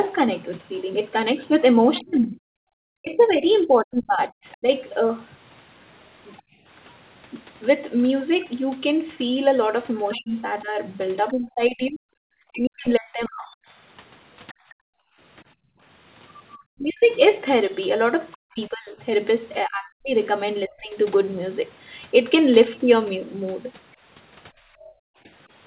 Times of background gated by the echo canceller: 6.41-6.66, 14.53-15.81, 24.53-25.26

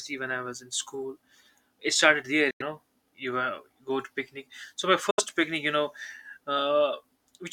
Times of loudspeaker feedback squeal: none

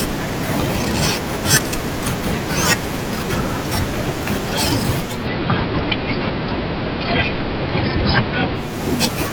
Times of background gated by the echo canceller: none

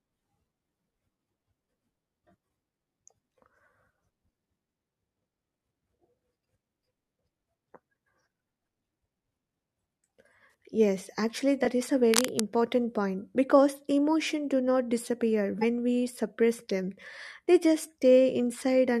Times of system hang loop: none

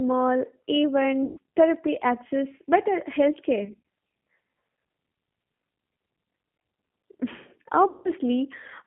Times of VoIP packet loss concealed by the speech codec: 1.26-1.38, 3.65-3.81, 7.89-8.10

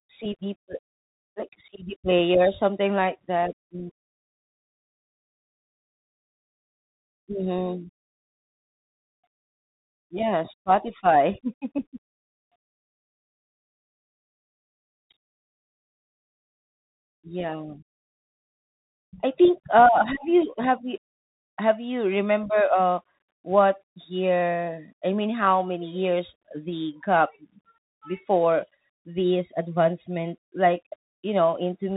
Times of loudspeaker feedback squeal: none

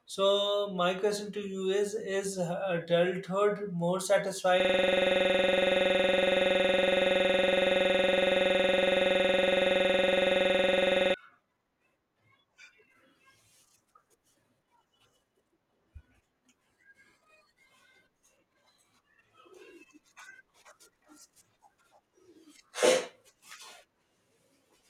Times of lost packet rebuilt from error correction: none

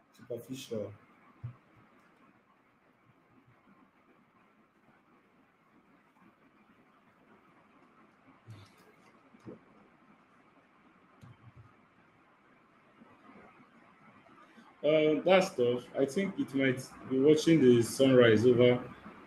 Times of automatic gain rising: 0.26-1.05, 14.81-18.00

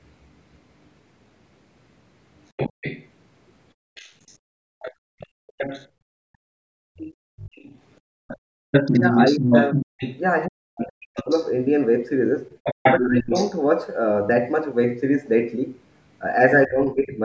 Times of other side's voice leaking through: 2.57-5.88, 6.97-11.51, 12.51-13.58, 17.10-17.16

